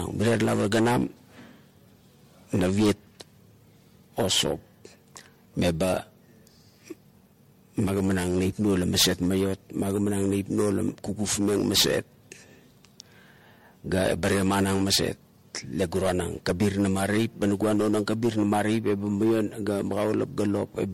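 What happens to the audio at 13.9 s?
Hard clipping is present at 13.9 s, as it is across the whole clip. The speech is driven about 1 dB beyond what the signal path can pass, so the highest peaks are sliced flat. Only a small share of samples are affected, so this is a light overload. The squared-off tops add harmonics high in the spectrum, heard as brief crackle and a gritty edge on the loudest syllables rather than constant fuzz.

Generation loss also runs through 13.9 s and the rest of the recording. The sound is swirly, smeared and hollow, with softened consonant attacks and nothing above 16.5 kHz. That is worse than a single pass at a low MP3 bitrate would produce. The likely cause is repeated decoding and re-encoding, several times over, through MP3 at 64 kbit/s. Each pass quantises on a shifted frame grid, so noise and spectral gaps pile up.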